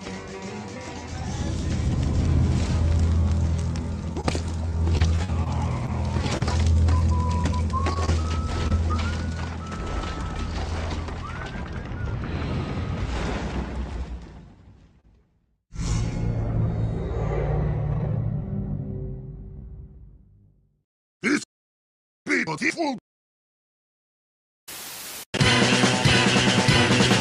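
Between 4.13 and 8.72 s, packets of this audio were dropped or arrived too late, one at a time and spread across the stretch: scattered short gaps. There were about fifteen of them, none longer than about 40 ms. The receiver concealed each by extending the preceding sound, roughly 300 ms of fill in total, around 7% of that span. The result is a run of brief ticks, smears and small hiccups rather than audible dropouts. A single short concealed packet loss follows at 15.00 to 15.05 s, where 20 ms of audio failed to reach the decoder in time. The receiver synthesised 30 ms from the preceding sound, then crossfaded back into the real signal, leaving one brief smeared wobble at that point.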